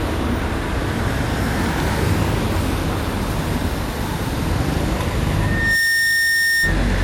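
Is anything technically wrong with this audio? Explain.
Yes, two things stand out.

Generation loss runs through the whole clip. The sound is swirly and hollow, with smeared transients and blurred attacks, worse than a single lossy encode should produce. The likely cause is repeated re-encoding: each decode-and-encode pass quantises again on a shifted frame grid, so the noise and spectral holes pile up. The character fits several passes, maybe around five, through WMA at about 96 kbit/s. There's still content up to about 20.1 kHz.

Loudspeaker feedback squeal shows up from 5.38 s to 6.81 s. A single tone at 1.8 kHz swells over roughly 0.4 seconds and settles at about 5 dB above the rest of the audio before it stops. That happens when a microphone hears the speaker it's feeding and the loop gain at that one frequency goes above unity, so the tone keeps growing until something limits it or the loop is broken.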